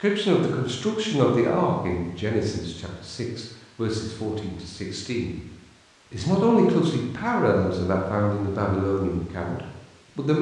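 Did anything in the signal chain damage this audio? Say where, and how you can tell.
No, nothing in the chain from capture to playback left an audible mark on this speech recording.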